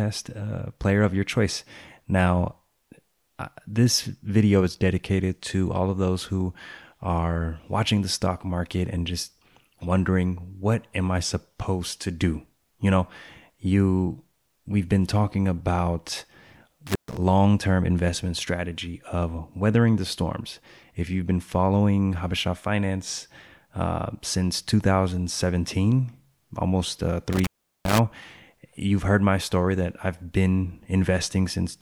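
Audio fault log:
16.87–17.17 s, intermittent contact: the speech drops out for about 130 ms just before "term investment strategy", with crackle at both edges where a loose plug or cable loses and regains its connection. While the circuit is open only faint hiss gets through. On a waveform the signal collapses to a near-flat band framed by sharp spikes; a spectrogram shows a short blank gap between vertical broadband streaks from the crackle.
27.33–27.99 s, intermittent contact: right after "almost uh" the line opens again, this time for about 385 ms, so the gap is longer. The same mechanism applies. A connection breaks for a moment, crackling as the contact separates and closes, and low hiss fills the silence between. The waveform shows a flattened stretch bounded by jagged transients. The spectrogram shows a wider empty region with broadband bursts at each edge.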